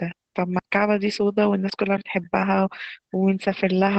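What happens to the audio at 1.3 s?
As throughout the clip, Opus voice compression at 12 kbps in SILK mode removes everything above about 8.6 kHz and coarsens detail, leaving the speech plainly muffled and hoarse.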